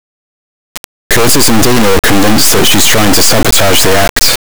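From the first moment to the last, the speech is replaced by a harsh, extremely loud buzzing square wave, falling to silence only where the sound is very quiet. This is integer read as float: 32-bit integer samples are interpreted as 32-bit float values, so most land near zero or far past full scale and the output snaps between silence and the clipping limit. Unlike ordinary overload clipping, the original waveform shape is not merely flattened at its peaks but lost entirely.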